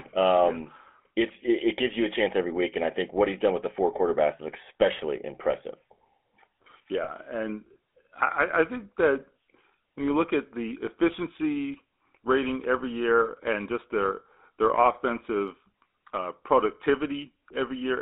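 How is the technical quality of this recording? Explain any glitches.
The recording has codec damage throughout and one brief dropout. The GSM full-rate codec is plainly audible across the whole clip. Its regular-pulse excitation gives speech a buzzy, gravelly roughness, and the band is limited to about 250 Hz to 3.5 kHz, consistent with roughly 13 kbps.

Lost GSM frames occur from 7.04 to 7.10 s, just before "and I I think". The decoder repeated the last good parameters, so a 40 ms gap, consistent with two frames, is heard as a short metallic ring.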